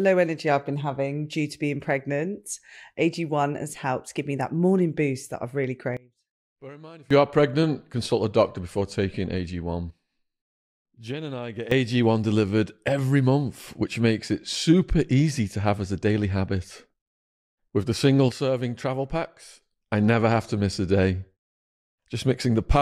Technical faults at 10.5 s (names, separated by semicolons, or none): sudden gain jump